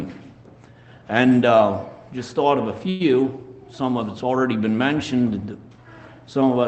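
At 2.89 s to 3.02 s a call audio freeze interrupts the sound: a short fading buzz fills about 107 ms, likely from packets delayed until the jitter buffer ran dry. Playback then resumes with nothing lost, just 107 ms later, through the Opus-coded, 8 kHz band-limited path.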